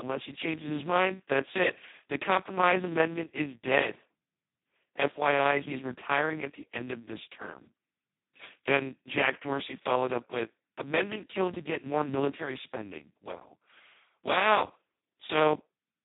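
Speex codec running at its lowest setting, which fits roughly 2 kbps, starves the excitation throughout, so the speech sounds hoarse and robotic, with nothing above 3.8 kHz.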